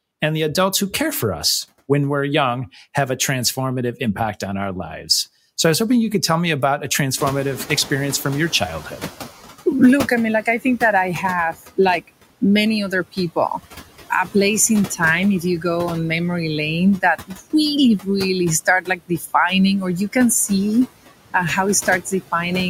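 Speech runs throughout with the background pumping: it sinks between words and comes back up underneath them, which are noise suppressor artifacts from a suppressor that pulls down about 14 dB in every band it judges to be steady noise, frame by frame, across the whole clip. Around 7 s the room noise jumps by about 22 dB, ending up about 16 dB below the speech. From 7.16 s to 9.32 s that louder background comes through with too little reduction and then settles down. This is the noise suppressor catching up: its noise estimate needed about 2.2 s to adapt to the new level before applying the full cut, about 10 dB. Between 18.66 s and 19.32 s, parts of the speech turn faint and swallowed, in total about a fifth of a second. This is speech cut by the noise suppressor, which mistook that speech for background and turned it down with the noise, by about 15 dB at the deepest point.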